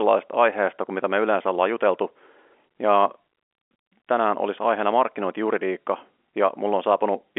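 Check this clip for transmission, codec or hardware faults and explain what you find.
No faults turn up here; the speech comes through on an ordinary G.711 telephone line, so everything sits in the familiar narrow band of roughly 300 Hz to 3.4 kHz with nothing above about 3.8 kHz, and that's just how this kind of call is supposed to sound.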